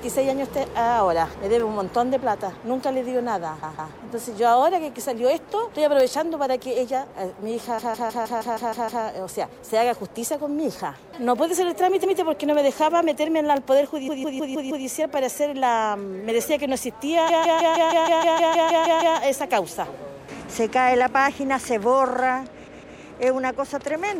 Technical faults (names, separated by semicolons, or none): periodic USB or driver dropouts; repeated frames